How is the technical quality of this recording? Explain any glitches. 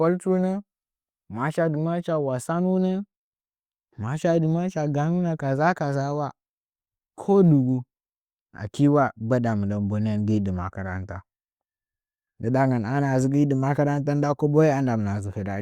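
The technical quality of the recording is sound, with no glitches to explain.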